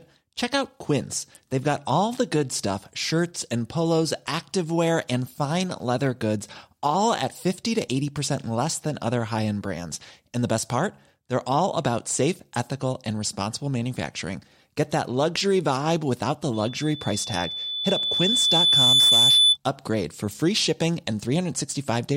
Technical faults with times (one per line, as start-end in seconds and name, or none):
16.53-19.57 loudspeaker feedback squeal